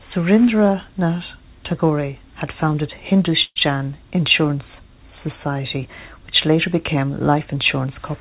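At 3.44 s, just after "had founded", packets most likely stalled in transit and the jitter buffer ran dry, causing a call audio freeze until 3.58 s. The receiver stretched the last sound into a fading buzz for about 117 ms, the final 40 ms of which is silent. Speech then resumes where it stopped, with nothing lost but everything after arriving about 117 ms later. Throughout, the sound has nothing above 4 kHz, which fits a G.711 mu-law call path at 64 kbps.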